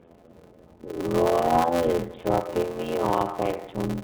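From start to finish the speech sounds dull and boxed-in, with nothing above about 4 kHz, and it carries a plainly audible rough, slightly synthetic edge. That is the sound of the iLBC codec, a narrowband VoIP coder that encodes each frame's excitation independently of the one before. The character fits its 30 ms frame mode at 13.33 kbps.

Running through the whole clip is also a steady buzz at about 86.1 Hz, and the speech moves at only 0.625 times its normal speed while keeping roughly its natural pitch. This is a padded block size mismatch. One stage hands over shorter blocks than the next stage reads, so the remainder of every block is zero-filled, and a tiny gap recurs at the block rate. The figures point to 512-sample reads filled with only about 320 samples each.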